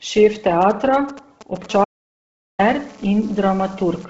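Across the whole speech clip, the sound has a breathy, grainy edge, and nothing is present above 7.8 kHz. The heavy damage is likely from Bluetooth LC3 compression. It fits 10 ms frames at a low bitrate near 16 kbps. The upper spectrum is zeroed and refilled with noise.

From 0.62 to 1.66 s come GSM signalling bursts. A nearby 2G phone is sending short groups of radio pulses, and the audio circuit rectifies them. They come through as a galloping dit-dit-dit of brief 217 Hz buzzes, roughly 15 dB below the speech.

At 1.70 s the pattern turns into steady GSM phone buzz, lasting to 4.05 s. The phone is now in a call, transmitting in bursts 217 times a second. The result is a hard, raspy buzz rich in harmonics, about 24 dB below the speech.

From 1.84 to 2.59 s there is an audio dropout to silence, about 0.75 s long. The input was likely lost while the recording continued writing silence. The sound cuts off mid-flow. 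The gap is dead silent, with no room tone.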